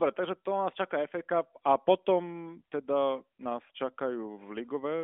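No technical faults can be heard in this speech.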